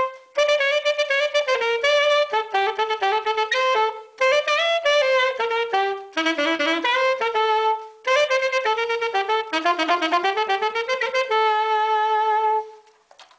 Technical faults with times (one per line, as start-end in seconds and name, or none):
6.56-6.62 short concealed packet loss